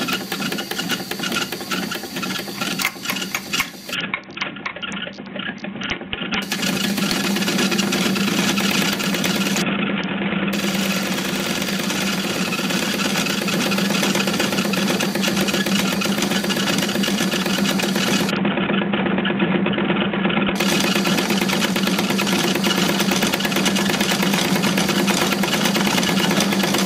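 Three spells of Bluetooth SBC bit pool drop, at 3.94 to 6.42 s, 9.62 to 10.53 s and 18.30 to 20.56 s, dull the treble and add gritty noise, fitting a bit pool cut from 28 to 5, near 54 kbps. Unlike dropouts, the sound never stops.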